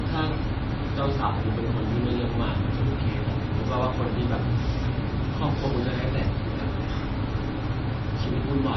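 Throughout this speech recording, heavy lossy encoding, likely MP3 compression at a very low bitrate of roughly 23 kbps, has starved the encoder of bits. It has chopped off everything above 5.9 kHz and zeroed weaker frequency lines that flicker on and off between frames. The result is dull, muffled speech with a watery, swirling texture, metallic chirping on s sounds and softened, smeared consonant attacks.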